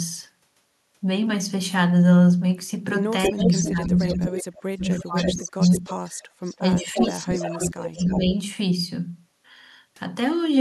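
From 3.23 to 4.43 s there is an echo leak. A delayed copy of the speech comes back 327 ms late. It sits only about 5 dB below the direct speech. An echo canceller on a loudspeaker side likely let its microphone pickup through.

From 3.29 to 5.85 s the speech is suppressed in double talk. The level falls in broken patches, by about 35 dB at worst, for around two seconds in total. The canceller likely treated the talker as echo and turned both down.

A second echo leak runs from 4.99 to 8.2 s. The copy arrives 331 ms late, about 10 dB down. The likely cause is the same incomplete cancellation.

Double-talk suppression returns from 6.58 to 8.35 s. The speech dips by up to about 25 dB over roughly a second and a half. It is likely the same canceller clamping down again.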